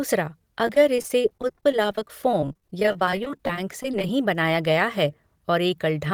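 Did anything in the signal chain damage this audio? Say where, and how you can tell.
Yes, the damage happens at the network stage. From 0.66 s to 4.09 s, just before "बनाया गया है", the speech turns choppy and robotic from repeated packet loss. Dozens of short holes, none longer than about 22 ms, recur throughout. The receiver patches each one by extending the last sound, so roughly a fifth of that stretch is concealment. The robotic, repetitive texture comes from those extended pieces, not from silence. Because the holes are brief and recur densely, this is not a single dropout, and it is not steady codec smearing.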